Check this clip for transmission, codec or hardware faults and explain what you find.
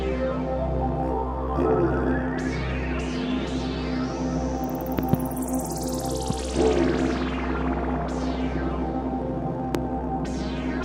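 Four loud pops break through the audio, a hardware-type fault.

Loud pop at 4.99 to 5.16 s (a pair), 6.30 to 6.33 s, and 9.75 to 9.77 s. A sudden voltage step or spike, likely from a connector, switch, static discharge or driver glitch, gets added to the signal, and the downstream circuitry shapes it. Each sounds like a sharp pop or thump standing about 15 to 20 dB above the sound, which continues underneath.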